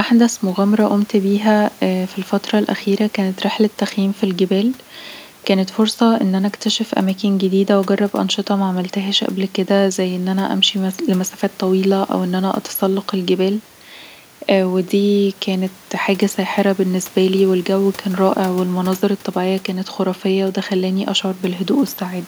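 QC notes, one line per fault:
No faults are heard in this speech recording. A faint room noise sits about 30 dB below the speech and belongs to the recording space itself.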